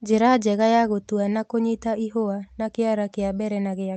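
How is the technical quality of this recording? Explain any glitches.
Nothing stood out on listening to this speech recording, which comes across as an ordinary call-path capture with nothing in it that calls for explanation.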